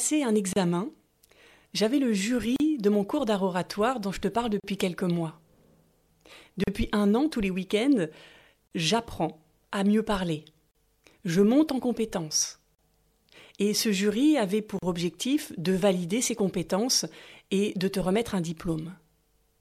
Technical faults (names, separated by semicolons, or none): gap at a join of encoded pieces